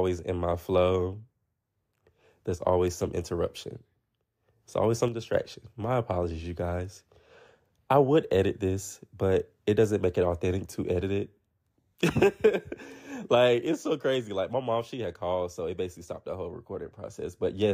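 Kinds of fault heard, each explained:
One channel drops out: From 5.08 to 5.34 s the speech suddenly falls by about 6 dB, then returns. The dip lasts about a quarter of a second. Its onset is hard, with no fade in. The likely cause is one side of a stereo pair going silent briefly. Once both sides are summed to mono, the shared sound halves. Anything only on the missing side vanishes.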